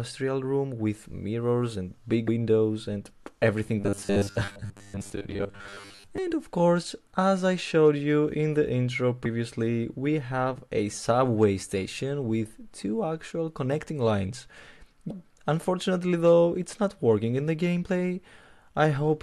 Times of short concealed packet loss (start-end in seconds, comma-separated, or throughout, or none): none